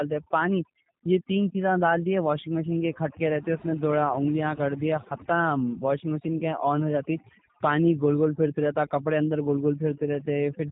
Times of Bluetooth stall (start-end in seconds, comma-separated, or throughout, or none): none